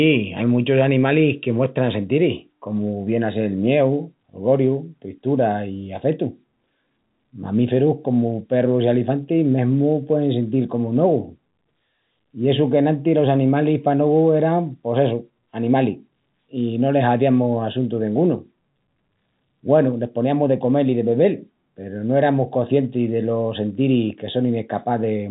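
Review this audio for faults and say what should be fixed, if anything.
Nothing stood out on listening, so there is nothing here that needs fixing.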